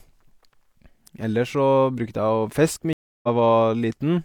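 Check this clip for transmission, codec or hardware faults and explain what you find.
There is a stream reconnect at 2.93 to 3.28 s: about 0.3 s of silence, then the speech resumes roughly a fifth of a second later, as a fresh decoder restarts mid-stream after the dropped connection.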